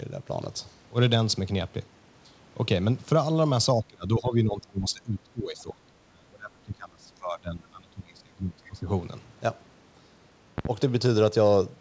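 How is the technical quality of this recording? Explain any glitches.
The recording has two clear faults. It also passes through a call path whose band stops at 8 kHz, which fits a G.722 wideband codec.

From 3.79 to 8.89 s, about five seconds, the speech is suppressed in double talk. The level sinks by up to about 25 dB and parts thin out or vanish. This is likely because both sides spoke at once and the echo canceller couldn't tell the near talker from loudspeaker echo, so it turned everything down. A network dropout cuts in abrupt gaps with codec garbling. This instead turns the gain down only for as long as the overlap lasts.

Between 10.58 and 10.69 s there is a loud pop: two sharp clicks close together, about 15 dB above the speech. The likely cause is a sudden voltage step, such as a connector, a switch or static, which the following circuitry shaped into a brief double transient. 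Clipping flattens the speech peaks themselves. Here the speech carries on intact underneath, and the pops sit on top as separate events.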